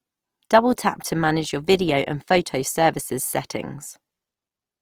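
A speech clip carrying plainly audible Opus compression throughout, most likely from encoding in the codec's music (CELT) mode at a low rate, which fits roughly 24 kbps. Band energies are preserved but their fine detail is filled in, so voiced tones turn grainy, rough and noisy rather than swirly. A spectrogram shows fullband content reaching 20.4 kHz with few holes, but smeared, noise-like texture in place of crisp harmonics.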